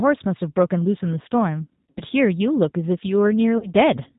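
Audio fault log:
throughout, G.729 codec: the speech is band-limited with nothing above 4 kHz and has a plainly audible rough, synthetic edge, which fits G.729A at 8 kbit/s rebuilding each 10 ms frame from a vocal tract filter, pitch predictor and a few pulses.
1.91–2.01 s and 3.58–3.68 s, VoIP packet loss concealed by the speech codec: gaps of about 60 ms and 40 ms are filled by the decoder stretching its last pitch and filter into a fading buzzy tone or coloured noise, with the voice staying weak or distorted briefly after.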